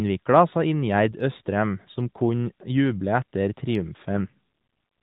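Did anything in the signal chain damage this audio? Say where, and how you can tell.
Yes, an AMR rate drop on the network side. From 4.13 to 4.32 s the speech turns rougher and more synthetic without a gap, which fits a step down to 4.75 kbps.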